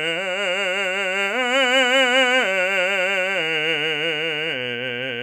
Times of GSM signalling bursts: none

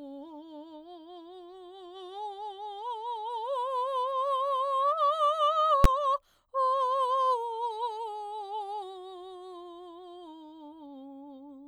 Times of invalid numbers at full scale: 5.84

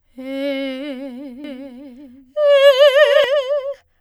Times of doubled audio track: 1.44-3.24

